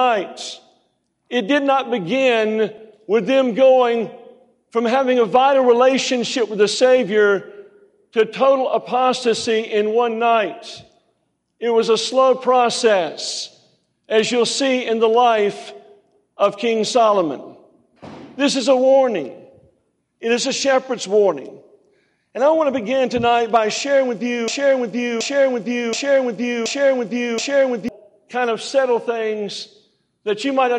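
At 24.48 s a broken-record loop begins: a 0.73 s fragment repeats exactly, five times back to back, until 27.88 s, and the audio that belonged there is lost. A stalled player or stream likely kept resending its last buffer. Waveform and spectrogram show identical blocks tiled end to end.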